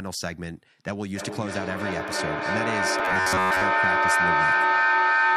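From 1.11 s to the end of the clip, a feedback echo between two devices sets in. The speech returns at a steady interval of around 300 ms, each repeat thinner and more ringing. Instead of fading, the repeats build until the loop peaks at about 9 dB above the original speech. Another device in the room is playing this call's audio back into a live microphone, outside the reach of the echo canceller on that microphone's own device. The fixed spacing between returns separates it from room reverberation, which smears evenly rather than repeating.

Between 2.99 s and 3.63 s, the speech turns into a rigid, metallic buzz at a fixed 93.8 Hz while still loosely tracking the syllables. The likely cause is robotic sound from repeated short buffers. A chunk of roughly 10.7 ms was replayed over and over to cover for late-arriving audio, so most of the real signal in that stretch was skipped. Unlike the echo, this is a constant pitch imposed on the sound rather than delayed copies of it.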